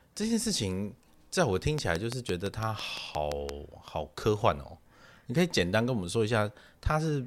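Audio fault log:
1.79–3.50 s, train of clicks: a likely source is interference from nearby equipment or a faulty connection or power supply, injecting a pulse at a regular 5.85 per second. About ten near-identical clicks tick over the speech, peaking roughly 15 dB above it.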